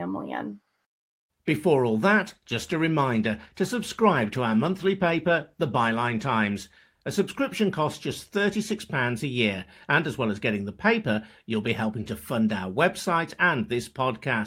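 From 2.26 s to 7.97 s, a call bitrate drop makes the speech rough and muffled, consistent with the encoder falling from about 40 to 18 kbps. It bottoms out for about 4.2 s, and the spectrogram's upper band goes dark.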